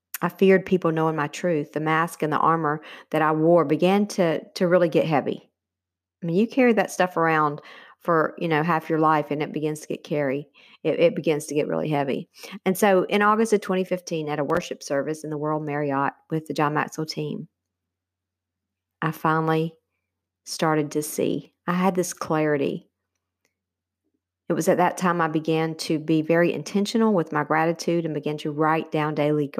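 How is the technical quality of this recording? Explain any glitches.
The recording has one glitch, a short burst of processor overload crackle in the middle of the speech.

From 14.50 to 14.63 s, the processor failed to deliver several audio buffers on time. Each missed buffer was replaced with silence, which fits buffers of around 5 ms with a handful dropped across that stretch. Every dropout starts and stops abruptly, so the hard edges produce a gritty, crackling tear that sits on the speech for about 0.13 s before playback recovers.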